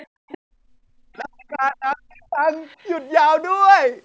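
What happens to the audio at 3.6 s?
Nothing goes wrong at 3.6 s: the speech carries on intact there, with only the ordinary call microphone processing trimming the deepest bass and leaving nothing above 8 kHz.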